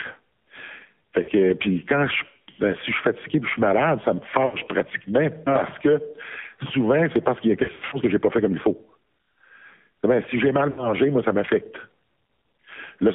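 Throughout, the speech carries the AMR narrowband mobile codec sound. Energy is confined to roughly 150 Hz to 3.4 kHz, leaving a bare spectrogram above that, and the voice is plainly buzzy and synthetic, which fits a low mode around 7.4 kbps.

Lost AMR speech frames interrupt it at 1.22 to 1.30 s, 4.46 to 4.57 s, 7.64 to 7.98 s and 10.70 to 10.91 s. The decoder fills each gap by repeating the last pitch and vocal-tract settings at falling gain, so each one is heard as a smeared, warbling dip. The 7.64 s stretch is the longest, with about 200 ms lost in scattered runs of up to 100 ms. On the waveform these show as sagging envelopes, and on the spectrogram as frozen, fading harmonic bands.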